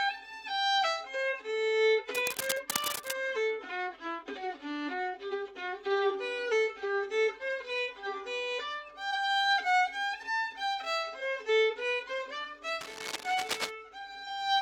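Dense, uneven scratching sits just under the sound from 2.13 to 3.11 s and again from 12.80 to 13.70 s: cable scratch noise, likely from a worn connector being moved.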